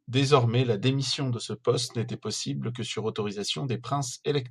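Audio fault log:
No faults heard anywhere in this speech recording.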